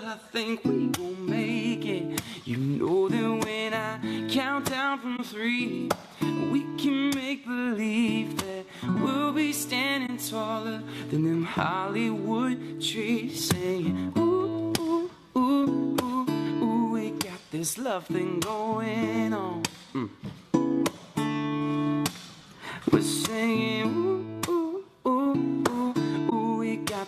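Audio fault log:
5.16–5.19 s, 10.06–10.11 s, 26.29–26.33 s: corrupt frame concealed. The decoder caught damaged AAC data and muted or smeared it over spans of 30, 50 and 36 ms that show as vertical gaps or blurred columns.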